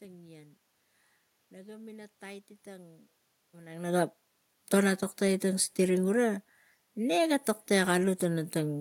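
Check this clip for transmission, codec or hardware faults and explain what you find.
Nothing wrong with the system can be heard here.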